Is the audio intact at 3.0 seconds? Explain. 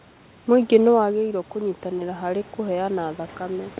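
No. At 3.0 s the audio is inside a stretch of automatic gain rising that runs from 1.08 s to 3.79 s. Shortly after 1 s the level reaching the microphone fell by about 9 dB as the talker moved back. The automatic gain control reacted by slowly raising its gain, so at 3.0 s the speech and the room noise behind it are still swelling upward together instead of holding a steady level.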